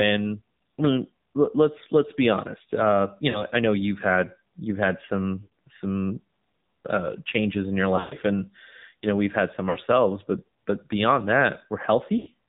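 AMR narrowband mobile codec, throughout: the speech is coded at 7.4 kbps with nothing above 4 kHz, leaving it muffled, plainly buzzy and synthetic. Lost AMR speech frames occur at 3.30 to 3.44 s, 5.42 to 5.48 s, 7.96 to 8.15 s, 9.70 to 9.78 s and 12.18 to 12.28 s. Each time, corrupted frames were replaced by stretched, fading copies of the last good frame, heard as brief dips, warbles or smeared gaps. The 7.96 s event is the longest, with about 120 ms missing in one run.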